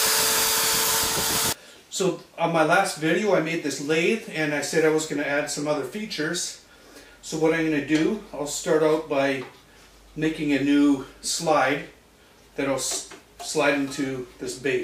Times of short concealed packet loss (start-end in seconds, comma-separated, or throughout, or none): none